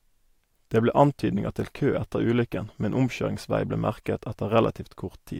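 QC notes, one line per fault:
No audible faults detected.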